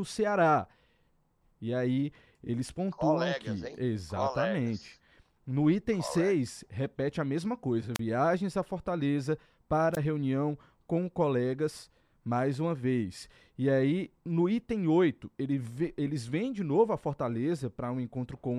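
Around 7.95 to 7.99 s, then again at 9.93 to 9.98 s, you get a wireless microphone squelch dropout: the FM link fades, a quick burst of hiss, then the receiver mutes for about 32 ms and 18 ms before the speech comes back.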